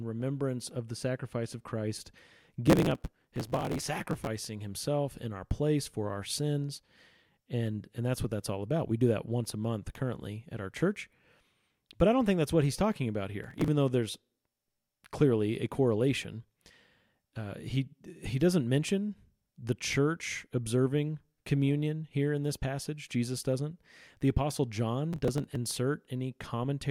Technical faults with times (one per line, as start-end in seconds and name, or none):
2.67-4.27 processor overload crackle
13.44-13.68 processor overload crackle
25.13-25.56 processor overload crackle